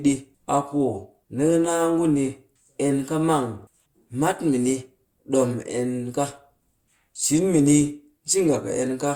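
No technical faults can be heard in the speech at any point.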